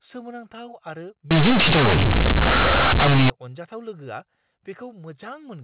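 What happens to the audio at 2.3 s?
At 2.3 s the speech is hit by companded audio read as linear, lasting from 1.31 to 3.30 s. The A-law telephone bytes are played as plain 8-bit samples without expansion. Quiet parts swing as wide as loud ones, giving harsh, buzzy, very loud distortion and heavy noise between syllables.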